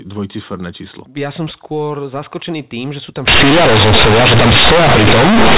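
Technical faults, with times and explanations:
3.28 s to 5.57 s, companded audio read as linear: from 3.28 s to the end, the mu-law telephone bytes are played as plain 8-bit samples without expansion. Every sign change throws the output across about half its range, so quiet passages become as large as loud ones and the speech turns into very loud, buzzing distortion with heavy noise in the pauses. Ordinary clipping only flattens the peaks and leaves the pauses quiet.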